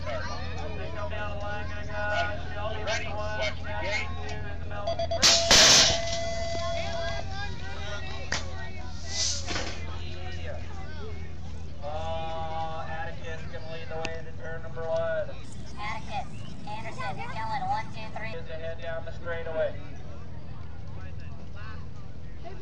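From 15.44 s to 18.33 s there is a section at the wrong speed. That stretch runs at 1.32 times its original rate, so the audio turns hurried and rises in pitch by about five semitones, with tempo and pitch shifting together. The likely cause is that this portion was handled against the wrong sample clock, with material recorded at one rate read back at a faster one.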